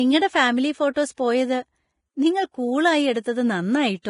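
From start to finish the speech carries heavy Vorbis compression damage, which is likely the cause: nothing sounds above 10.5 kHz, and the treble turns to grainy hiss, which fits a bitrate near 29 kbps. Unlike broadband background noise, this hiss tracks the speech's own treble and roughens its tones.

From 0.94 to 0.96 s there is pre-echo. A block's quantisation noise, sized for a sharp attack late in that block, spills across the 26 ms before it, leaving a brief hiss that leads the attack and softens it. Reverb or ordinary smearing would trail after the attack instead.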